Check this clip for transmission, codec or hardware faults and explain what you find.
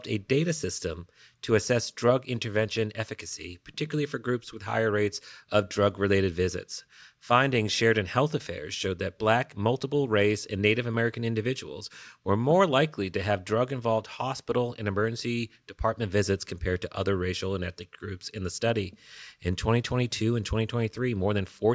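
No transmission, codec or hardware faults are audible anywhere in this speech recording.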